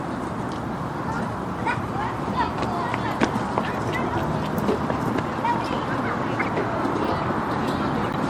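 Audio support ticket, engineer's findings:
Corrupt frame decoded, three events. 1.83 s: brief faint blip, one frame's worth. 6.39–6.48 s: loud chirp/noise burst, a few frames. 8.00–8.16 s: strong burst spanning several frames. Component: codec decoder playing damaged frames; flipped bits misread as wrong gains and codes, spraying energy into wrong bands. Distinct from dropout: energy misplaced, not just lost. Distinct from plain click: spectrally coloured, lasts frame-length, not one sample.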